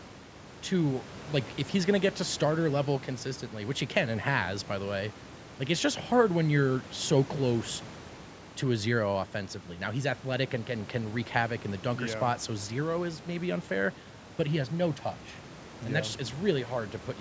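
No technical faults are audible.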